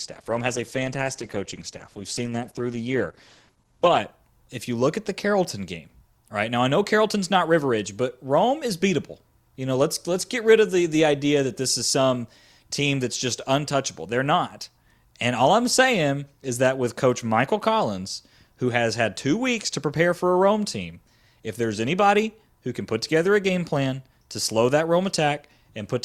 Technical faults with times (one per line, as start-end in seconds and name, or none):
0.00-4.00 adaptive stream starting at a low bitrate